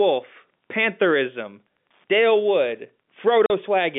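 Throughout the speech, the level rises and falls by about 5 dB around loud sounds, a gain pumping effect likely caused by a fast limiter or compressor working on an overdriven input. At 3.46 s, a 40 ms hole of silence with hard edges interrupts the audio; this packet loss filled with silence fits two lost 20 ms packets, heard over the narrow telephone band of the G.711 line.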